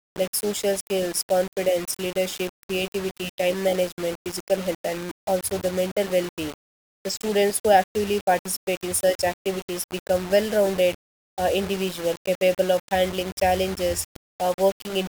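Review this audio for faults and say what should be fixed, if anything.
The speech is grainy from start to finish, with a rough, fizzy distortion that rides along with the signal rather than sitting underneath it as a steady hiss. Softer syllables and word tails get crunchy, and the quietest moments sputter or cut to silence. That's likely low bit depth without dither: values rounded to very few levels, which fits about 5 bits, leaving the error only around 15 dB below the signal. To prevent it, keep at least 16 bits throughout and add dither whenever you reduce bit depth.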